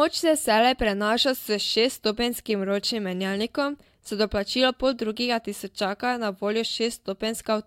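Nothing stood out as a technical problem on listening to this speech recording.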